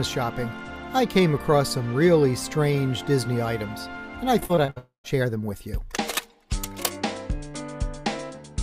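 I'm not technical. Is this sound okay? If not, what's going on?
No, there's a problem just before the 5-second mark. From about 4.39 to 4.78 seconds the sound turns choppy, with around five tiny holes, the longest about 60 milliseconds. This is repeated packet loss: the audio travels over a network in small chunks, and several didn't arrive in time. Each time, the receiver covered the hole by stretching the last bit of sound, which is what makes it sound choppy. Nearly half of that short stretch is patched-over sound rather than the real thing.

Right after, from 4.78 to about 5.06 seconds, the sound fades into a brief buzz or hiss and then goes quiet for roughly a tenth of a second before resuming. The likely cause is a long network dropout: for about a quarter of a second nothing came through at all. The receiver kept the last sound going briefly, then gave up and went silent. When the audio returns, the missing part is simply skipped.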